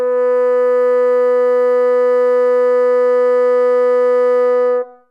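Nothing technically wrong turns up anywhere in this short music clip, so there's nothing to flag here.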